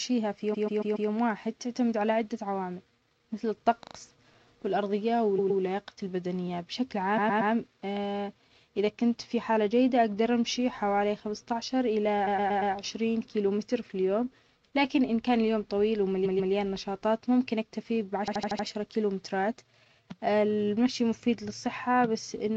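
The speech stutters seven times from repeated frames. A short block of coded audio plays again and again, adding time each pass. At 0.53 to 1.09 s a 139 ms block repeats four extra times. At 3.83 to 3.95 s a 48 ms block repeats three times. Blocks of 116 ms loop at 5.38 to 5.61 s, 7.17 to 7.52 s and 12.26 to 12.73 s. A 139 ms block loops at 16.25 to 16.52 s, and an 89 ms block at 18.28 to 18.67 s.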